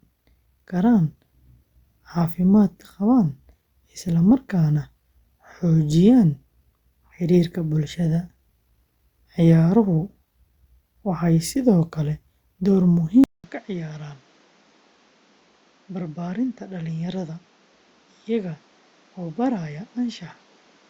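Speech, with a 200 ms gap at 13.24 s, then duller, quieter sound with fresh background noise about 30 dB down to the end, likely an input switched to a poorer device. A spectrogram shows everything above 7.6 kHz vanishing; the waveform shrinks by roughly 10 dB.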